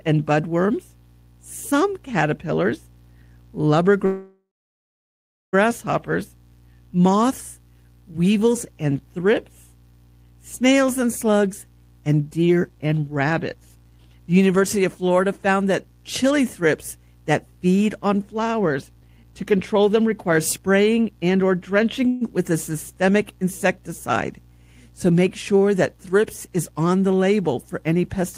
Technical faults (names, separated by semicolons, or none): call audio freeze; jitter buffer slow-down; jitter buffer speed-up